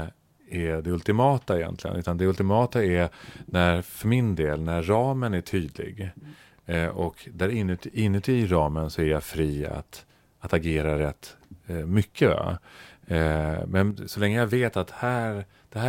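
A speech recording with one brief fault: between 13.91 and 13.98 s the level drops abruptly by about 6 dB for roughly 70 ms, then snaps back to its previous level. The sudden step, rather than a fade, points to a one-channel dropout as the likely cause. With one stereo channel lost for that moment, the mono sum keeps only half the content shared by both sides, and anything carried solely in the missing channel vanishes for the duration.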